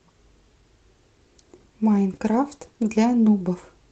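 Speech over an Opus call with top end near 8 kHz; at 2.15–2.17 s a lost packet rebuilt from error correction shows as a 20 ms rougher, noisier spectrogram smear, fitting one concealed packet.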